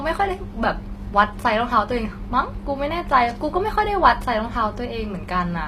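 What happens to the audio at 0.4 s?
HE-AAC compression runs through the whole clip, including 0.4 s: the treble is rebuilt by copying lower bands upward, likely at about 24 kbps, so s sounds turn gritty and lispy, with nothing above 15.5 kHz.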